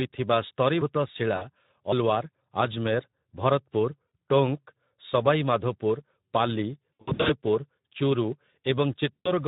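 Throughout, the Speex codec is starved of excitation bits, a low-quality setting that fits a rate around 11 kbps. The speech comes out plainly hoarse and noisy, with a grainy edge on every syllable.

VoIP packet loss concealed by the speech codec strikes four times. The decoder replaces each missing stretch by extending its last pitch and filter at falling gain, and since each frame builds on the one before, the damage lingers past each gap. At 1.35–1.45 s, 60 ms of audio is lost and the sound is stretched and fades. At 4.07–4.11 s, a shorter 40 ms gap is concealed the same way. From 6.99 to 7.33 s, 260 ms is lost in runs of up to 60 ms scattered over about 360 ms, so the speech repeatedly stretches and fades and stays weak between the gaps. At 9.22–9.32 s, a 140 ms loss stretches and fades the sound.

At 8.32 s, a dropped buffer (overrun) likely occurs: samples were overwritten before they were read, removing roughly 20 ms of audio. 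The two sides are joined directly, with no silence, so the speech makes a small jump ahead.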